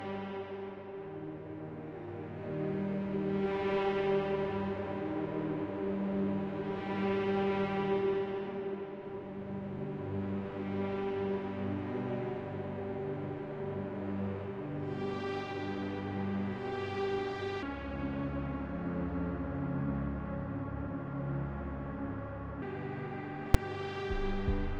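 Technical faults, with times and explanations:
17.63 to 22.62 s, section at the wrong speed: this five-second stretch plays at about 0.71 times normal speed, so pitch drops by roughly seven semitones and everything turns deep and sluggish, likely from resampling against the wrong clock. A spectrogram shows all harmonics shifted downward and time-stretched.
23.54 s, invalid numbers at full scale: a 5 ms block of invalid values was forced to full scale, heard as a single sharp bang. The waveform shows a short rectangular slab pinned flat at one extreme value, far beyond the audio's peaks, and the spectrogram a bright vertical broadband stripe.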